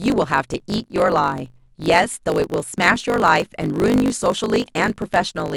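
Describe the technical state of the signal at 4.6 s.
At 4.6 s, as across the whole clip, a block size mismatch (truncated) is present: one stage writes longer blocks than the next reads, fitting 1024-sample blocks, and each tail is discarded. The speech carries a 50 Hz buzz and runs about 1.07 times fast.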